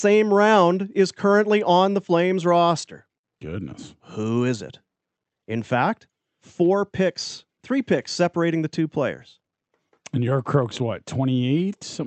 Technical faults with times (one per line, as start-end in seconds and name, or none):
none